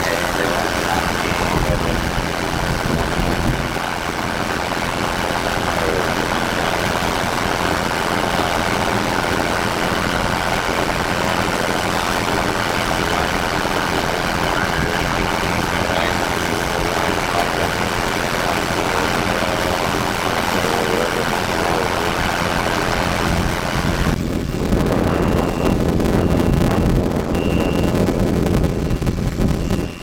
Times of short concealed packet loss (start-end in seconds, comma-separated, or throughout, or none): none